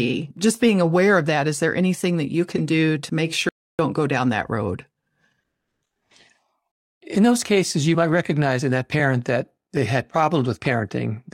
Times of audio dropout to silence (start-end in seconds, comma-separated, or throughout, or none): 3.49-3.79